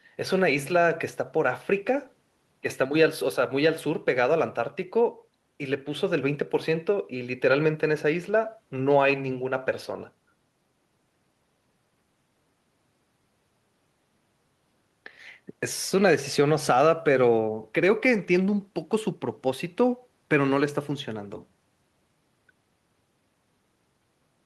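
No faults are audible in this speech recording; the call-codec path behaves as expected, with its normal coding texture and a top end that stops at around 12 kHz.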